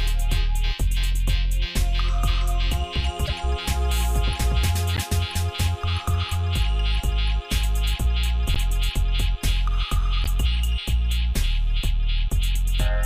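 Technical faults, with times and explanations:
3.26–3.30 s, 4.94–5.00 s, 8.54–8.58 s and 10.24–10.27 s: corrupt frame decoded. Each event is a short chirp or burst lasting 30 to 60 ms, which fits about two damaged frames. The decoder played flipped bits as if they were valid, so misread gains and codes put energy at the wrong frequencies. The burst near 8.54 s is the loudest and the one near 4.94 s the quietest.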